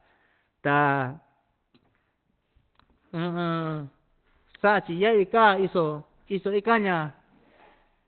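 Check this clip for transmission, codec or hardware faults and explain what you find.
One fault runs through the whole clip: the speech carries audible codec damage, likely from Opus compression working in its speech mode. Nothing is present above 4.2 kHz, so the band is cut to a narrowband telephone-like range, which fits a low rate of around 16 kbps. At such a rate the encoder models the vocal tract rather than coding the full spectrum, and the result sounds muffled and hoarse. Unlike MP3 damage, it swirls less.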